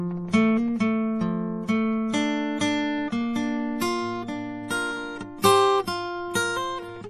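Throughout the music, nothing sounds above 14.3 kHz and the texture turns watery and swirly, with plainly audible damage that fits heavy MP3 compression, likely near 40 kbps. At 5.42 s, pre-echo: codec noise spread across the block puts a brief hiss about 19 ms ahead of a sharp attack, softening it.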